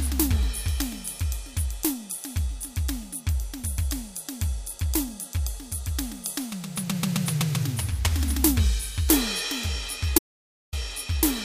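The input likely dropped out briefly while the recorder kept writing silence, so from 10.18 to 10.73 s an audio dropout to silence cuts 0.54 s of music to dead, toneless silence.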